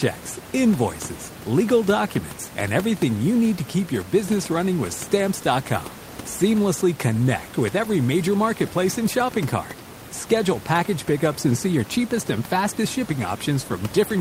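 No technical faults are audible in the signal; the only thing beneath the speech is the room's own background noise, sitting about 15 dB below it.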